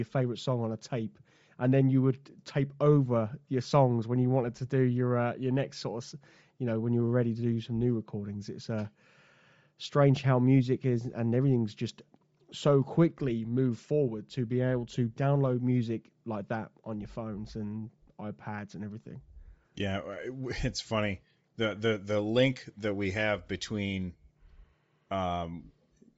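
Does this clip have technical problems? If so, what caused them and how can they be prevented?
Yes. Bluetooth LC3 compression throughout: the speech has a breathy, grainy top end, likely from upper bands being discarded and noise-filled, which fits 32 kbps LC3 with 7.5 ms frames. Prevent it by recording over a wired connection or selecting a higher LC3 bitrate.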